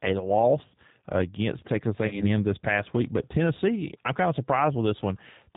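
The whole clip runs through what sounds like an 8 kbit/s G.729 codec. Everything above 4 kHz is gone, and the speech has a plainly rough, slightly synthetic edge. From 2.08 to 2.27 s there's VoIP packet loss concealed by the speech codec. Roughly 30 ms went missing, which fits one lost packet. The decoder stretched its last frame into a fading buzz or coloured noise, and the speech stays weak until it recovers.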